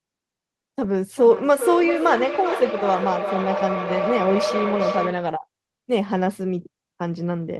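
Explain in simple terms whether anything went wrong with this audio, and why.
Two nearby devices on the same call let sound loop from loudspeaker to microphone, growing with each pass. This feedback howl runs from 1.16 to 5.39 s: a tone near 500 Hz swells almost as loud as the speech, with the loop repeating roughly every 0.4 s.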